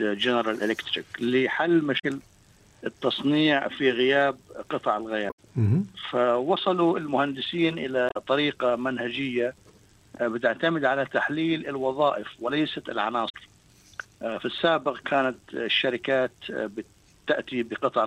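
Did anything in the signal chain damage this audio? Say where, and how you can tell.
Yes, there's damaged data in the compressed stream at the codec stage: blips at 1.96–2.04, 5.27–5.39, 8.07–8.17 and 13.26–13.35 s, where the decoder misreads frames and then resyncs.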